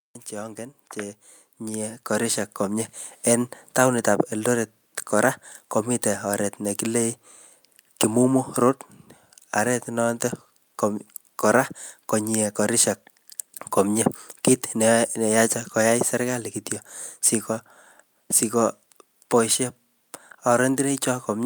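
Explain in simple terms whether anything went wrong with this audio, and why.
Yes, something went wrong: automatic gain rising. From 0.3 to 6.88 seconds the recorder decided the sound was too quiet and slowly turned itself up. The background noise grows louder along with the voice, which shows it's the machine adjusting, not someone moving closer.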